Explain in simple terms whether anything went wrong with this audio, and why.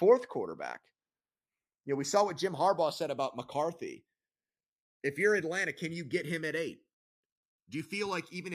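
Channels drifting apart: the left and right sides run on slightly mismatched clocks, so their delay creeps to about a millisecond, giving a slow flanging sweep throughout.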